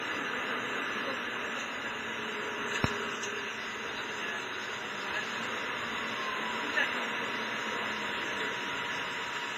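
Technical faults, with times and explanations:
Throughout: low-bitrate audio saved at a high bitrate. Nothing sits above 15.5 kHz, and the artefacts of a starved encoder run through the sound. It was likely a low-bitrate WMA-style source re-encoded as high-rate MP3, which can't restore what was lost.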